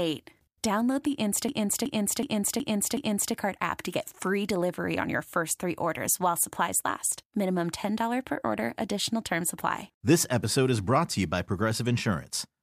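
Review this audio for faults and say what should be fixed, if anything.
A system hang loop runs from 1.49 to 3.34 s. One 372 ms piece repeats five times at 2.69 Hz, which fits a 16384-sample buffer. Prevent it by having a watchdog mute output when the driver stalls.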